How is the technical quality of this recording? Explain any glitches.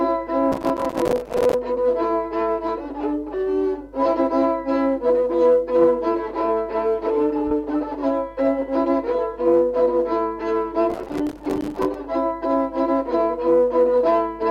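Two bursts of processor overload crackle, from 0.52 to 1.54 s and from 10.90 to 11.95 s: the processor repeatedly missed its deadlines for buffers of roughly 5 ms, leaving dozens of tiny silent gaps that tear the sound into gritty crackle.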